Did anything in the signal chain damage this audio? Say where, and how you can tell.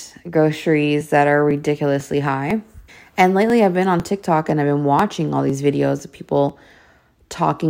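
Yes, at the driver/USB stage. From 1.01 s to 6.99 s the speech picks up ticks spaced a steady 0.5 s apart, around fifteen in all. These are periodic USB or driver dropouts: something keeps stalling the USB bus or audio driver on a fixed schedule, and each stall skips a couple of milliseconds of samples outright rather than padding them with silence. That even clockwork spacing is what rules out mouth clicks or mic handling.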